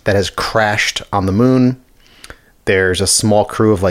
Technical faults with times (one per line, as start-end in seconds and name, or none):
none